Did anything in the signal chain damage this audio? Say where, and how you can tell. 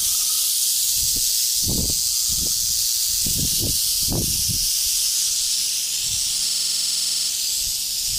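Yes. From 6.50 s to 7.29 s the sound stops moving forward. A single 46 ms fragment repeats exactly, 17 times in a row, producing a rapid machine-gun stutter at 21.5 Hz. This is a system hang loop at the driver or buffer stage. The computer or driver stalled while the audio hardware kept replaying the same ring buffer, whose length fits a 2048-sample buffer. Roughly 0.7 s of the real signal is lost beneath the loop.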